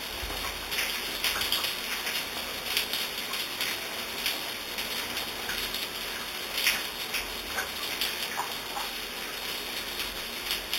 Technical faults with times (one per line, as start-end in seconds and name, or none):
0.00-10.79 imaging from sample-and-hold upsampling